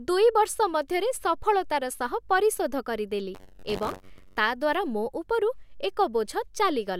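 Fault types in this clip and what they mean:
buffer tearing: robotic 94 Hz buzz over the speech, as writer and reader cross each period, splicing in a sliver of older audio.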